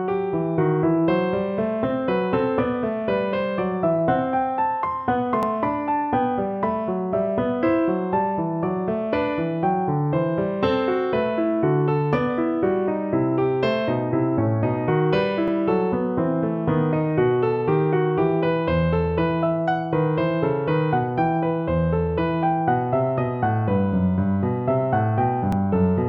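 At 5.43, 15.48 and 25.52 s, overlapping chunks cause a stutter: each 10-second block starts about 48 ms early, so that sliver plays twice. Unlike a dropout, nothing goes missing. The sound repeats instead, and the ten-second spacing marks it as a block boundary.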